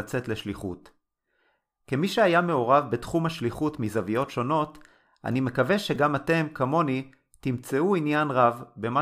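At 5.95 s a brief click with a buzzy edge cuts into the speech. This is a repeated buffer. When fresh audio failed to reach the playback device in time, it replayed the chunk it already held. The sound fits a very short 5 ms buffer played over again, twice extra, each repeat butting hard against the last. That sliver is too short to hear as a stutter, so it comes through as a click, and around a hundredth of a second of real audio is skipped.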